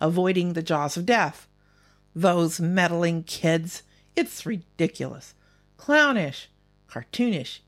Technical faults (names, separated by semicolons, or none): mains buzz